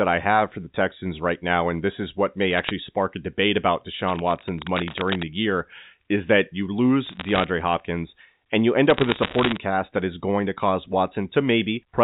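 Bits flipped on the digital phone line between 2.51 and 2.70 s, corrupting individual samples at a rate of roughly half a percent. These are bit errors on a digital phone line: each damaged sample jumps abruptly, so the speech picks up a burst of sharp ticks and crackle while the speech itself stays intact.

From 4.02 to 5.25 s, between "spark a debate about" and "year is that you", a worn cable or connector being moved likely caused rapid swings in contact resistance. This cable scratch noise sounds like uneven rustling and scratching, sitting about 10 dB below the speech.

The bit errors return from 7.06 to 7.44 s, just after "year is that you", and again from 8.90 to 9.57 s, between "and you end" and "cast that is going". The rate in that last stretch is somewhat higher, closer to 0.7 percent, so the crackle there is denser. All of it rides on G.711 A-law audio, with the usual 4 kHz telephone band limit.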